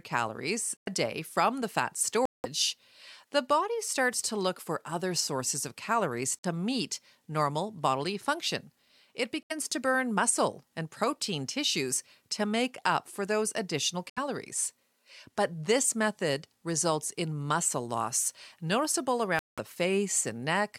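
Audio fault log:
0.77–0.88, 2.25–2.46, 6.40–6.45, 9.43–9.52, 14.10–14.18 and 19.39–19.59 s, corrupt frame muted: the speech drops abruptly into silence, e.g. before "day from the fat", between "other sources of calories" and "meet normal bodily function", and after "up for those additional". Damaged compressed frames were rejected and replaced with silence. Gaps of 50 to 210 ms suggest two to eight frames each. Timing holds.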